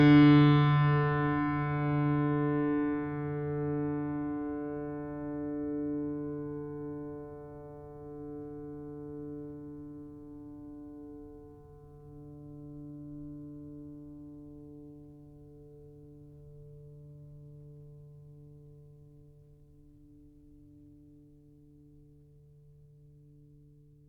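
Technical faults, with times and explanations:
No technical faults can be heard in this music recording, and the signal stays steady and intact from its opening to its close.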